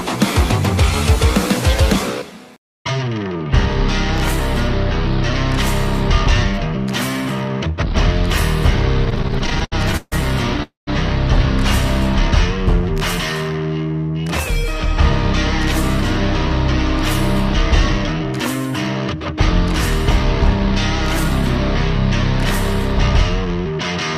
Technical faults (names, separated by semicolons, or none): repeated stalls (stutter); call audio freeze; jitter buffer speed-up